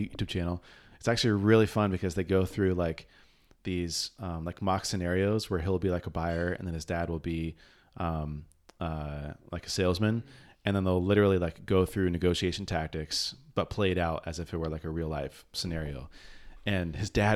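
No technical faults can be heard in this speech recording.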